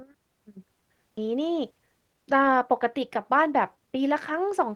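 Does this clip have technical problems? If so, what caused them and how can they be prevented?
Yes. A skip ahead at 1.17 to 1.19 s drops about a second of speech. The audio was lost on the way or discarded by the jitter buffer when it overflowed, with later audio already queued, so playback joins both sides almost directly. Sizing the buffer for realistic delay spikes, rather than discarding queued audio on overflow, would prevent this.

A jitter buffer speed-up from 1.27 to 4.67 s plays the speech at 108% speed with unchanged pitch. The receiver repeatedly trimmed short pitch-period pieces to shed about a third of a second of excess delay, which sounds hurried. Draining surplus delay more gently, over a longer stretch, would keep the pace natural.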